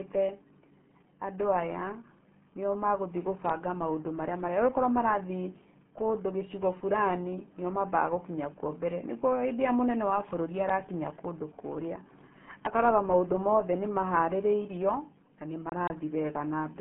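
RealAudio 14.4 codec damage runs through the entire clip. The speech is confined to a narrow 150 Hz to 3.5 kHz band with nothing above 3.8 kHz, and heavy coding leaves it muffled and gargly, consistent with an 8 kbit/s dial-up codec.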